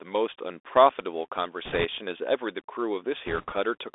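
The whole clip carries the sound of a Bluetooth CVSD headset codec. The speech is squeezed into a telephone band of about 300 Hz to 3.6 kHz, so it sounds thin and boxed in. The codec sends a single up-or-down bit per sample, and its step size chases the waveform. That damage is plainly audible. Sibilants come out scratchy. A grainy hiss sits under everything. The sound fits a 64 kbps CVSD link.

From 1.65 to 1.85 s, bit errors on the Bluetooth voice link break in. Flipped bits knock the step tracking off course. Each bit counts for little, so there are no sharp clicks. Instead a rushing crackle rides over the speech. The error rate here is around a couple of percent. The same fault returns from 3.27 to 3.54 s, at a somewhat lower rate. It is slightly less rough, but it lasts longer.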